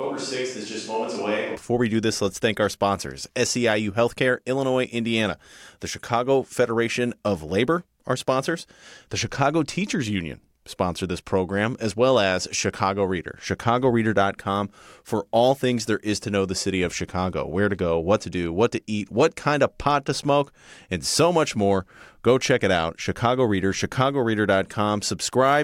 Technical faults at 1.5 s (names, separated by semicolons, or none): switch to a distant microphone